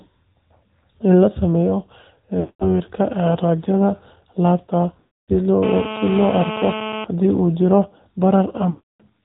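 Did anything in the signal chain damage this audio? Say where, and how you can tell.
Yes. AMR narrowband mobile codec, throughout: nothing above 4 kHz survives, and the speech has a plainly audible buzzy, synthetic edge. That points to a mid-rate mode near 10 kbps, where a few pulses per subframe drive a vocal-tract model that loses natural texture.

Lost AMR speech frames, at 2.40–2.68 s, 5.00–5.31 s (just after "raajada laabta") and 8.70–9.02 s: each gap stretches and fades into silence, then speech returns weak and rough. Gaps of about 0.2–0.3 s suggest runs of ten to fifteen failed frames, concealed by repeating decaying parameters.

GSM phone buzz, 5.63–7.05 s, ending just before "hadii uu": a hard, raspy 217 Hz buzz with dense harmonics sits about 8 dB below the speech, steady and unrelated to it. A nearby 2G handset on a call is bursting, and the analogue input stage rectifies those radio pulses.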